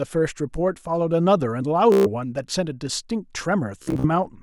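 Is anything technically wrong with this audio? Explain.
Yes. The speech turns into a rapid machine-gun buzz from 1.92 to 2.07 s, and again in broken bursts from 3.83 to 4.07 s. This is Bluetooth stutter: packets arrived late or were lost, so the receiver replayed its last short buffer, then skipped ahead, losing about 140 ms and 150 ms of sound.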